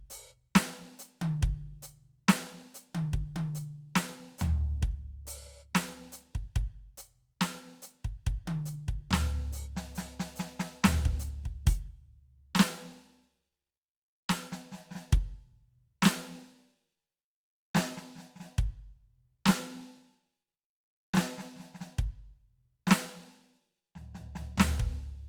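No technical faults can be heard anywhere in this music recording. Nothing along the way breaks, interrupts or disturbs the sound.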